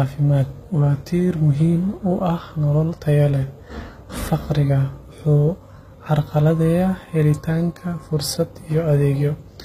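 HE-AAC compression runs throughout the speech, likely the cause of the plainly audible damage: the upper band is rebuilt from copied lower bands rather than coded, so s sounds turn gritty and metallic below a cut-off at 14.9 kHz, which fits a low bitrate around 20 kbps.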